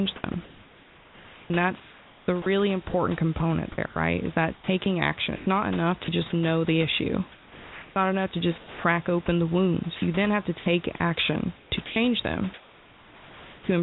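From 0.16 to 6.08 s, before "just know the issue", the speech is chopped by the voice detector: about 2.2 s of quieter syllables and word edges become flat comfort noise, likely from discontinuous transmission switching on and off. On a spectrogram, the speech harmonics break off abruptly into smooth, featureless noise bands, and the waveform shows blocky, even-textured gaps between syllables.

After "just know the issue", from 7.32 to 8.84 s, comfort noise replaces the background for about 0.9 s, likely because the sender stopped transmitting during the pause. The real room noise, which sits about 23 dB below the speech, is traded for a steadier synthetic hiss. This shows as a uniform, grainless patch on the spectrogram.

Within that stretch, from 8.58 to 8.84 s, just before "open the", sound is dropped by the voice detector. About 130 ms of real sound is lost to the fill, likely because the detector misjudged it as background.

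From 9.96 to 13.68 s, the chopping returns, with about 1.6 s replaced. The spectrogram alternates between striated speech and smooth noise blocks. Throughout, there is no energy above 4 kHz, consistent with a narrowband G.711-style call path.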